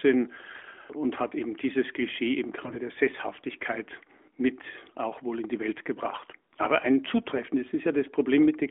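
From 0.52 to 0.71 s, and again from 2.60 to 2.77 s, the speech turns hoarse, scratchy and gargly. These are AMR bit errors. On a weak radio link, some of the less protected bits in the 20 ms frames arrived flipped, roughly 5 to 7 percent. The checksum on the key bits still passed, so the frames were decoded anyway. The driving pulses landed in wrong places, and the fine gain and spectrum values were off. Pitch and level stay roughly steady. The narrowband line, passing about 250 Hz to 3.5 kHz, is audible around both bursts.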